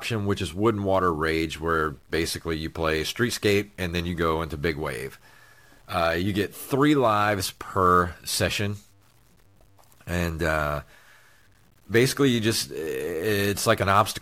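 From the first second to the end, the speech carries a grainy, buzzing distortion that tracks the voice rather than sitting beneath it. This is low bit depth without dither: the signal was likely cut to about 9 bits by plain truncation, so every sample snaps to a coarse step and the rounding error moves with the sound. The distortion sits roughly 40 dB below the signal. On a spectrogram it shows as a harmonic-laced haze that appears only where speech energy is. Zoomed in, the waveform shows visible staircase steps.

Running alongside it for the whole clip is sample clock jitter. The converter's timing wanders by a few microseconds, so each sample is taken slightly off schedule. The error is largest where the waveform changes fastest, giving a hiss and roughness that swells on loud and bright syllables and disappears in the pauses. This error sits roughly 30 dB under the signal. On a spectrogram it shows as broadband noise concentrated in the upper frequencies during speech. 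It falls silent between words, so the gaps look clean.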